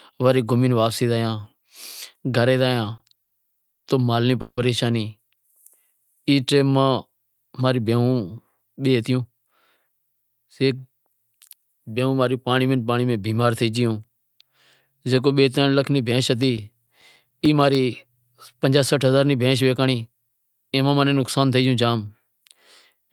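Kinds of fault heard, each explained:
Repeated stalls (stutter): packets reached the receiver late, so its jitter buffer ran dry five times between 2.97 and 4.59 s. Each gap was filled by extending the last sound, 400 ms in total and up to 160 ms at once, making a quarter of that stretch drag and stutter.
Jitter buffer slow-down: from 5.36 to 7.09 s the receiver rebuilt its reserve by repeating single pitch periods, adding 188 ms. The speech plays at 90% speed with unchanged pitch, sounding drawn out just before "ماں رو".
Jitter buffer speed-up: with excess audio queued, the receiver trimmed short pitch-period pieces to reduce delay. From 8.96 to 11.14 s the speech runs at 111% speed, losing about 0.3 s, and from 19.86 to 20.44 s at 112%, losing about 70 ms, sounding hurried at normal pitch.
CD scratch ticks: a disc blemish exceeded the error correction once per rotation, so the player interpolated or muted the damaged samples. 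Ten brief ticks, each a few milliseconds at most, recur regularly from 16.43 to 17.75 s, just after "لاکھ ری بھینش".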